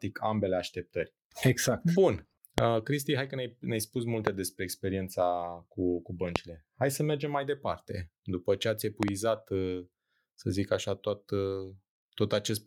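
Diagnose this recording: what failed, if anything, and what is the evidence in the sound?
Loud pops break into the speech at 2.58–2.60 s, 4.27–4.29 s just after "ne spus", 6.36–6.38 s after "cu cu", and 9.03–9.10 s after "ce ați", where two land in quick succession. Each spikes roughly 20 to 25 dB above the voice while the speech carries on underneath, unlike a dropout or clipping. The likely cause is a voltage step in the analogue wiring, such as a loose plug, switch or static discharge.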